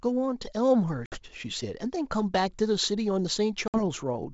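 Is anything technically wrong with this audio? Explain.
Yes. Packet loss on an ADPCM call occurs twice in this speech, at 1.06 to 1.23 s and at 3.68 to 3.83 s. Each time, about 60 ms of audio, probably a few packets, drops to hard-edged silence. The G.722 wideband coding around the losses keeps its clean 7 kHz bandwidth. Its ADPCM decoder predicts each sample and adapts its step size from past ones, so after the gap its state no longer matches the sender's. The speech resumes slightly distorted and settles within tens of milliseconds. That recovery glitch sets it apart from a simple dropout or mute, where sound returns cleanly.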